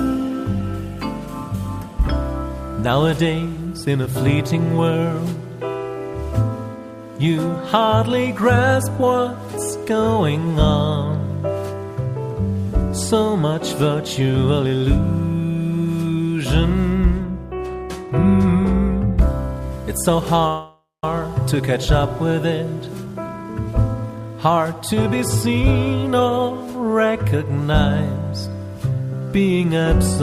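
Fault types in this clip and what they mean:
Call audio freeze: at 20.47 s the sound stretches into a fading buzz, then about 180 ms of silence, likely from delayed packets draining the jitter buffer.
Jitter buffer speed-up: from 22.52 to 25.55 s, and briefly at 26.12 s, the audio runs hurried at unchanged pitch as the receiver trims pitch periods to cut delay.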